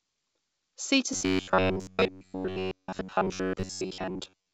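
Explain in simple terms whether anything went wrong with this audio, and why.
From 1.13 s to the end at 4.54 s, the speech turns into a stiff, metallic buzz at about 94 Hz. This is robotic sound from repeated short buffers, likely caused by audio arriving too slowly, so most of the time a roughly 11 ms slice is replayed instead of fresh sound.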